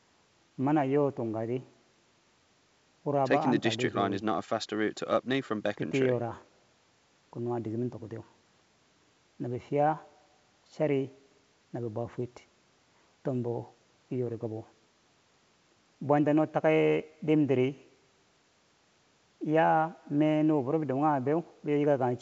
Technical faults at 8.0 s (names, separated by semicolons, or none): none